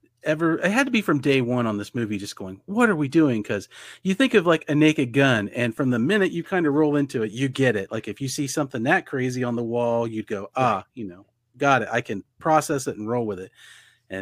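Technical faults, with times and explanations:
No technical faults can be heard in the speech recording. There is nothing to time or explain.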